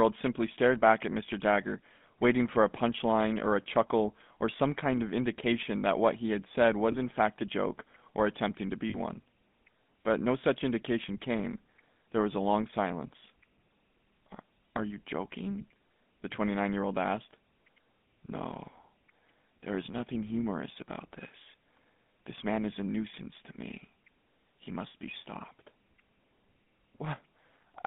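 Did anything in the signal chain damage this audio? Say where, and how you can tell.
Yes. The codec stage damaged it. Throughout, the speech has a plainly audible buzzy, gravelly roughness, and the band runs only from about 150 Hz to 3.5 kHz. That fits GSM full-rate coding at 13 kbps, which models the vocal tract and drives it with sparse, regularly spaced pulses.

The network or channel also dropped GSM frames, at 1.26 to 1.29 s, 6.92 to 6.96 s and 8.90 to 8.95 s. Each gap is a short, rough, metallic ring. The decoder repeated the last good frame's settings. The first two gaps fit one 20 ms frame each, and the last fits two frames, about 40 ms.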